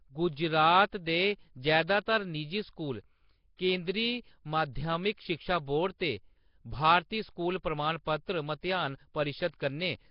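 From start to finish the speech carries a rough, hissy halo and a smeared, underwater feel, with nothing at all above about 5.3 kHz. That's likely Nellymoser compression, the old Flash microphone codec, and the heavy damage fits a rate of around 22 kbps. It works in short fixed blocks with very few bits per sample, so quieter bands get no bits and are refilled with noise. That's where the hiss and smear come from.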